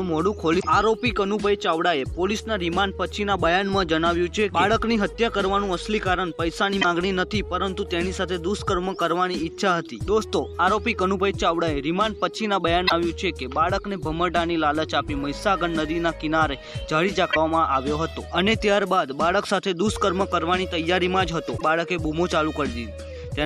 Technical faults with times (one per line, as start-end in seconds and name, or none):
0.56-0.64 damaged data in a compressed stream
6.78-6.85 damaged data in a compressed stream
12.84-12.92 damaged data in a compressed stream
17.28-17.37 damaged data in a compressed stream
21.54-21.62 damaged data in a compressed stream